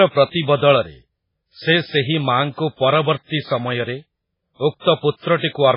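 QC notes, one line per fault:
Throughout: MP3 compression. Nothing is heard above 5.3 kHz, so the top end sounds dull and boxed in. The damage is heavy, with a watery, swirling quality over the speech. This is likely an MP3 encode at a very low rate, which fits a bitrate around 16 kbps. Short of bits, the encoder cuts the treble at a fixed point. It also drops weak frequency lines that flicker on and off between frames.
5.37–5.43 s: pre-echo. A short hiss runs for about 55 ms before a sharp attack, and the onset itself sounds softened and smeared. The codec spreads its quantisation noise across a whole block. Here the attack sits late in its block, so noise scaled for the loud moment spills into the quiet stretch just before it. That early spill is heard as hiss arriving ahead of the sound.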